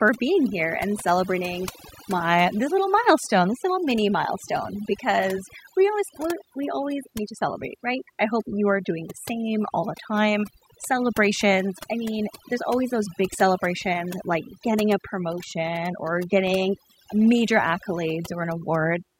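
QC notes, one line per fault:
Throughout: overdone noise removal. Noise reduction set too strong shuts off frequency bands near the noise estimate, taking quiet speech detail too. The background sinks to twinkling near-silence.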